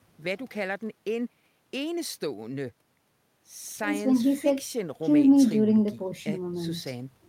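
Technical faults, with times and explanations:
No technical faults can be heard in this speech.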